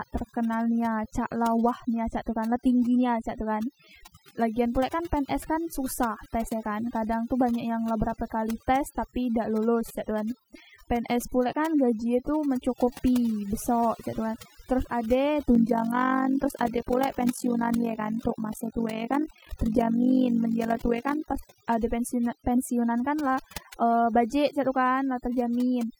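Across the whole recording the background sinks to an unnatural near-silence flecked with small twinkling, chirping specks. That is overdone noise removal. A noise reduction process was pushed too hard, so any frequency band sitting close to its idea of the noise floor was pulled far down or shut off entirely. The quieter components of the speech were caught and removed along with the noise.

From 15.55 s to 21.56 s a fast, rough flutter rides on top of the speech, giving it a rough tremolo. The level swings by about 11 dB at a rate of roughly 50 per second. This is overlap-add ripple. The audio was split into windowed frames and reassembled with an overlap whose windows do not add up to a steady gain, so the loudness dips and recovers once every frame.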